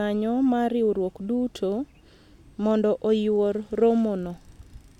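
Speech recording with no audible technical faults.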